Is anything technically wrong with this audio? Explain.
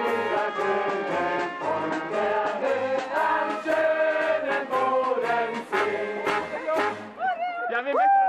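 Yes. A Bluetooth SBC bit pool drop occurs from 0.42 to 3.17 s and again from 7.59 s to the end. When the wireless link congested, the sender cut the SBC bit pool to keep audio flowing. The degradation is consistent with a fall from a bit pool of 31 to 13, near 94 kbps. Starved of bits, the highest sub-bands go nearly empty and the rest are coarsely quantised, so the treble turns dull and a gritty noise rises in both stretches.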